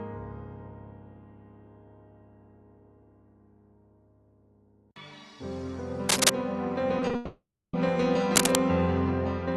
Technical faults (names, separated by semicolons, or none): cable scratch noise; short concealed packet loss; long network dropout